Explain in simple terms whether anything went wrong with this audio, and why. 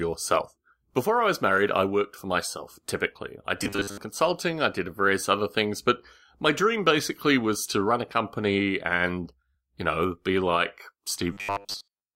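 Yes, twice. From 3.64 to 3.98 s, between "for myself typically I" and "consulting I did various", the speech turns into robotic sound from repeated short buffers, a stiff metallic buzz at 100 Hz. It happens again from 11.33 s to the end, right after "you know be like". The likely cause is audio arriving too slowly, so a 10 ms slice keeps getting replayed for most of that stretch.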